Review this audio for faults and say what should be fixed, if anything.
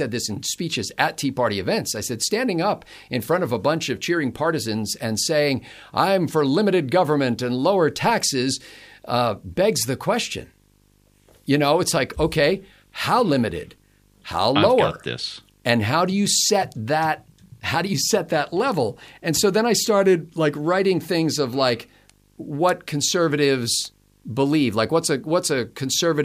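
Video or display buzz runs throughout: a 50 Hz field-rate buzz with hash above it, about 35 dB below the speech, plus a 15.6 kHz line tone that marks it as picture interference rather than plain mains hum. Route audio cables away from screens and video leads, and break any shared ground between them.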